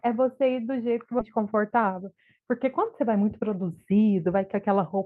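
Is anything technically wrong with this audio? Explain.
Yes, there are two faults in this speech.

At 1.19 to 1.21 s there is a skip ahead. About 0.4 s of speech was discarded, likely because the buffer overflowed while later audio was already queued, and the two sides are joined with nothing filled in. Unlike a dropout, there is no silence or concealment noise, just an abrupt jump forward.

From 1.29 to 3.4 s comes a jitter buffer speed-up. The receiver trimmed tiny pitch-period-sized pieces again and again, removing about a tenth of a second in total, so the speech runs at 105% speed and sounds slightly hurried. Unlike a resampling speed error, the pitch stays unchanged.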